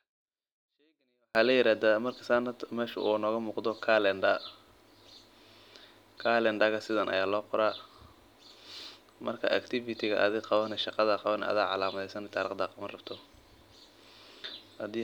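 From 0 to 1.35 s the speech is clean but nearly inaudible, about 48 dB too quiet. This is a 24-bit alignment error. Samples sitting in the low 24 bits of each 32-bit word were read as full 32-bit values.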